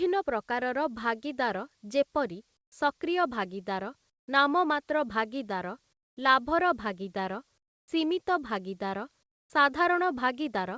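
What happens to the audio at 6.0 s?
From 5.93 to 6.17 s, about 240 ms, the real background drops out and is replaced by comfort noise, a steady, featureless hiss roughly shaped like the room sound but about 23 dB quieter. The likely cause is discontinuous transmission: the sender's voice detector judged this gap, where the background sits about 48 dB below the loud passages, to be silence and stopped sending audio, so the receiver filled the pause with synthetic noise. Like the rest of the G.722-coded audio, the fill carries nothing above 8 kHz.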